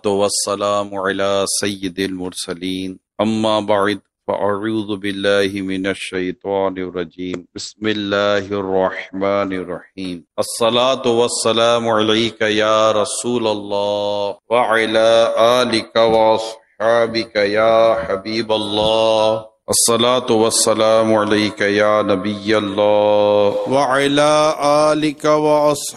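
From 6.14 s to 9.59 s the sound goes muffled and rough, with a watery, smeared texture, as everything above about 8 kHz disappears where it had extended to around 20 kHz. The coarse, band-limited quality holds for about 3.4 s before detail returns. This is a call bitrate drop: the bandwidth estimate fell and the encoder was pushed to code far more coarsely and narrow its audio band, which fits a fall from roughly 48 kbps to 14 kbps.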